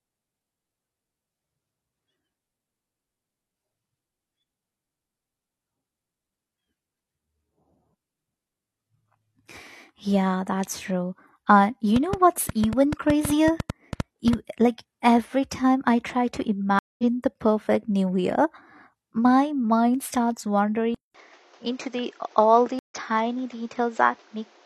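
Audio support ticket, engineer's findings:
Train of clicks, 11.96–14.34 s: about 15 irregular ticks, 6.3 per second, peaking roughly 10 dB above the speech; likely interference from nearby equipment or a faulty connection or power supply.

Stream reconnect, 16.79–17.04 s and 22.79–22.94 s: silences of 198 ms and 112 ms. Speech resumes about 200 ms and 150 ms later under a fresh decoder.

Input switched to a poorer device, 20.95 s to end: 200 ms gap, then nothing above 7.6 kHz, level down about 5 dB, new noise floor about 30 dB under. Likely a headset call profile.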